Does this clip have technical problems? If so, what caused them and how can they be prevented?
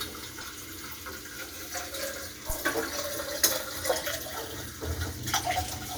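Yes. A corrupt frame was decoded at 0.41 to 0.46 s and again at 3.99 to 4.04 s. Flipped bits, spanning what sounds like a couple of frames, put energy at wrong frequencies, giving short, fairly quiet bursts. Error checking with concealment of damaged frames, rather than decoding them, prevents this.

A phantom power thump at 2.50 to 2.56 s came from supply voltage switching on a live input, passing a low thump that dies away within about 14 ms. Muting the channel before switching phantom power prevents it.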